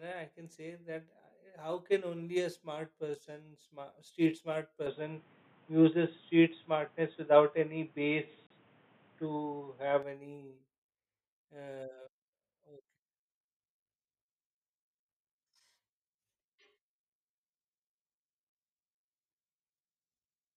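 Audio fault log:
4.87–10.03 s, input switched to a poorer device: after "person smart street smart" the sound turns dull and boxy, with nothing above 3.8 kHz, a level shift of about 5 dB and new noise about 35 dB down. There is no silence at the switch, and it clears again. Tone, level and noise all change together, which unlike a plain filter points to a likely device swap.
8.47–8.50 s, gap at a join of encoded pieces: a 36.5 ms silence with smeared edges opens mid-sound, then the speech resumes exactly where it stopped with nothing lost, unlike a dropout. This fits separately encoded pieces about 10 s long, joined without trimming encoder delay and padding.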